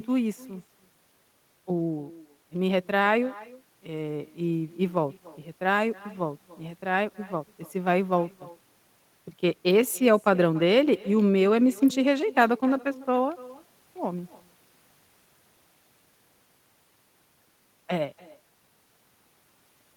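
Throughout the clip there is echo with no canceller: the far end's loudspeaker feeds its microphone and nothing strips that signal out, so the speech returns after about a third of a second, as a thin copy sitting about 22 dB below the original.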